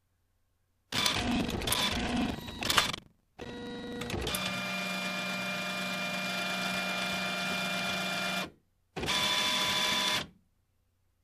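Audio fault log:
0.90–4.03 s, buffer tearing: a steady robotic rattle at about 23.4 Hz rides on the sound, heard only while signal is present. Writer and hardware have slipped within the ring buffer, so roughly a fifth of each period replays audio about a tenth of a second old, with hard joins either side; the rate fits a 2048-sample buffer.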